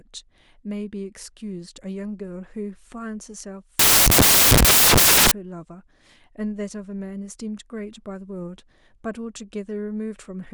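From 3.79 to 5.31 s the samples are built from the wrong bytes: misaligned or swapped byte order turns each sample's fast-changing low bits into its dominant part. The speech gives way to loud, harsh broadband noise, seen as a dense waveform block and a broadband spectrogram smear.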